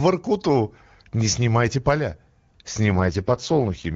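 From 2.86 s to the end, the speech turns rough, raspy and synthetic, with no gap and no loss of bandwidth. This is an AMR rate drop: the link pushes the AMR-WB coder down to a much lower mode, spending bits on error protection instead of detail. The grainy texture fits a fall from about 23.85 to 6.6 kbit/s, in contrast to the clean wideband sound before 2.86 s.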